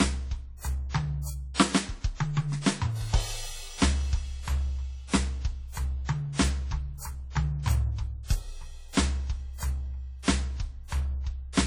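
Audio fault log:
throughout, low-bitrate audio saved at a high bitrate: the music carries heavy-compression artefacts that the large file cannot undo, which fits a 32 kbit/s WMA source likely re-encoded as 320 kbit/s MP3. A spectrogram shows a flat ceiling with nothing above 18.3 kHz.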